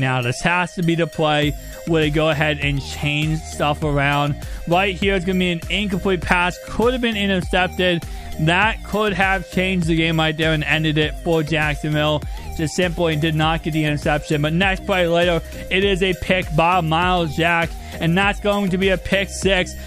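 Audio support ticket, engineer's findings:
No faults found on listening; signal path checks out with no audible defects traced to any component.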